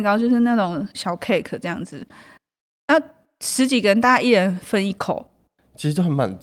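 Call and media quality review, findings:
No faults found in the speech recording. Nothing to log or escalate for this clip.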